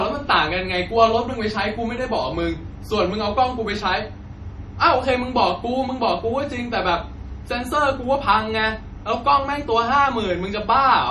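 MP3 compression damage runs through the whole speech clip. Nothing sounds above 13.4 kHz, likely because an MP3 encoder short of bits, at a rate near 40 kbps, cut the treble and zeroed weak frequency lines that flicker between frames, leaving a plainly audible watery swirl.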